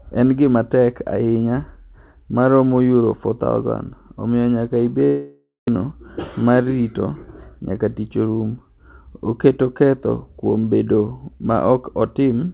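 From 5.05 to 5.69 s the speech gives way to a synthetic buzz that decays, then about 180 ms of near silence before sound resumes with roughly half a second of material gone. The likely cause is a long network dropout, with the receiver concealing the gap and then rejoining with its playout delay shifted by about 100 ms. On a spectrogram the last harmonics smear into fading horizontal streaks, then a blank band. The waveform shows a shrinking envelope before the flat stretch.

From 7.70 to 8.62 s a jitter buffer speed-up plays the speech about 8% fast at unchanged pitch, so it sounds slightly hurried. Backlogged audio was trimmed by repeatedly cutting out short pieces of one or a few pitch periods, roughly 100 ms in total. In the waveform, voiced cycles keep their length while stretches of them are missing. On the spectrogram, syllables appear compressed in time while harmonic spacing stays constant. 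Throughout, nothing reaches above 4 kHz, which fits a narrowband G.711-style call path.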